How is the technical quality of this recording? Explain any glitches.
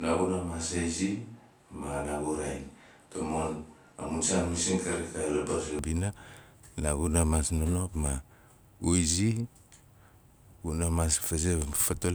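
The opening stretch of speech sounds roomy and hollow. From the very start until 5.79 s the voice is thin in the bass, sits roughly 5 dB lower than the rest of the clip, and carries a faint room noise well beneath it. At 5.79 s it snaps abruptly to a close, fuller sound. This is a switch to a distant microphone, likely because the close microphone's feed was missing at first, so a farther pickup captured more room reflection and less direct low end.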